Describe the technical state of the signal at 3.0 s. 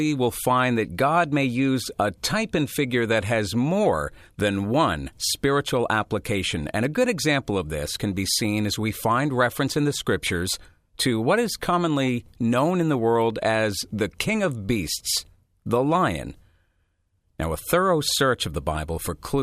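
At 3.0 s the speech signal is intact, with no dropout, distortion, clipping or other technical fault at that moment.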